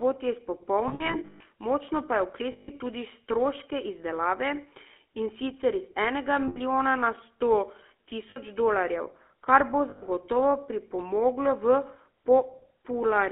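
The whole thing runs through a GSM full-rate codec, and you can plainly hear it: the speech is squeezed into a phone band of roughly 250 Hz to 3.4 kHz, and the pulse-driven vocal-tract model leaves that gravelly, buzzy edge on everything, which fits the old 13 kbps full-rate coder.

Then there are lost GSM frames, where the decoder keeps replaying the last good frame, so the sound hangs as a rough metallic ring. The first is from 0.88 to 1.45 s, just before "močno pa je": about 360 ms of gaps spread over roughly half a second, the longest stretch around 150 ms. Others follow at 2.52 to 2.72 s, at 6.48 to 6.59 s between "in sicer iz enega" and "na sto", at 8.30 to 8.38 s, and at 9.90 to 10.03 s right after "kar bo".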